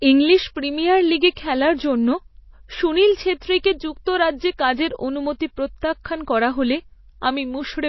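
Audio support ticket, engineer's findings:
Whole clip, speech: MP3 compression, plainly audible. Nothing above about 5.8 kHz, treble cut hard, watery swirl on sibilants. Bitrate starved, sounds like roughly 24 kbps, so the encoder drops weak frequency lines and they flicker frame to frame. Likely a low-bitrate MP3 stage upstream.

Pre-echo, three spots: 1.35 s, between "ইংলিশ প্রিমিয়ার লিগে" and "খেলার জন্য", about 18 ms of hiss; 3.63 s, about 14 ms; 6.04 s, just before "করা হলে", about 12 ms. Same codec. Block-wide quantisation noise bleeds ahead of sharp onsets, softening them.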